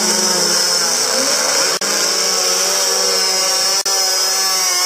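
Gap at a join of encoded pieces, at 1.77 to 1.81 s and again at 3.81 to 3.86 s. The sound drops out for about 42 ms and 43 ms, two seconds apart. That spacing points to separately encoded two-second pieces joined without trimming. Each keeps its encoder's start-up silence and final-frame padding. The sound stops with smeared edges, then resumes exactly where it left off.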